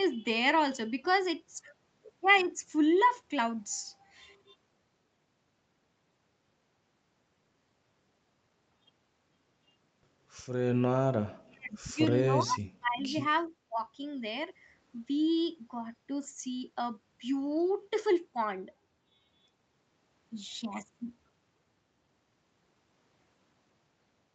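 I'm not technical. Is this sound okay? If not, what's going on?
No. Between 11.23 and 11.99 s, 12.22 and 13.14 s, and 13.48 and 13.79 s, the voice suddenly dips very quiet or drops out in bits. That's speech suppressed in double talk, likely because both sides talked at once and the call's echo cancelling turned everything down.

There's also an echo leak at 11.72 s and from 13.01 to 13.15 s: a faint, delayed copy of the voice, about 0.41 s late. The other end was likely on a loudspeaker, and its echo cancelling let some of it slip back.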